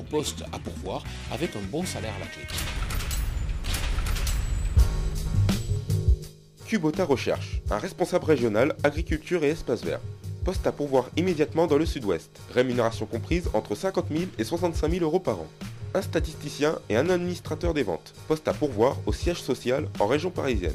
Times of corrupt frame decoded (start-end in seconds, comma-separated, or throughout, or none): none